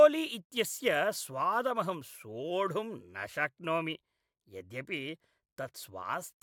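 No technical faults can be heard anywhere in the clip.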